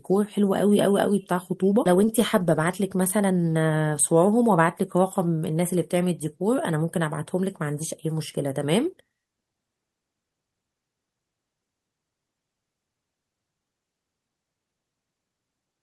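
At 1.85 s the speech jumps forward in a skip ahead: roughly a second of audio is discarded while later audio is already queued, so playback cuts straight across the missing stretch with no filler, and the two sides join almost seamlessly. From 1.95 s to 3.92 s a jitter buffer speed-up follows, as the receiver trims the excess backlog by repeatedly removing short pitch-period segments, around 150 ms in total. The speech runs at 108 percent at unchanged pitch and sounds noticeably hurried.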